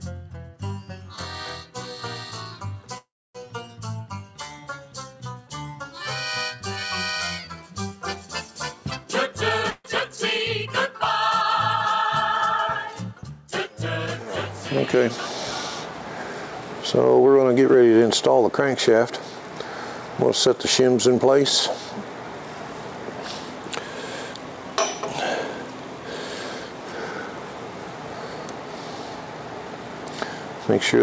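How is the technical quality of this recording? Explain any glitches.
The recording passed through a call link, and its top end stops at 8 kHz, which fits a wideband call codec. Three kinds of glitch are audible.

Call audio freeze, 2.98 to 3.37 s: the sound stalls, falling silent for about 0.28 s, then resumes exactly where it left off. The likely cause is delayed packets draining the jitter buffer. Unlike a loss, nothing is skipped.

Jitter buffer speed-up, 9.04 to 9.35 s (119%), 17.24 to 19.02 s (107%), 20.22 to 21.38 s and 24.34 to 25.49 s (106%): the receiver trims pitch-period slices to shrink its backlog, so the audio hurries at unchanged pitch.

Burst of packet loss, 9.70 to 9.86 s: about 140 ms was lost or came too late to play. The receiver stretches the last sound into a fading fill, then jumps ahead, so that stretch is gone, unlike the freeze.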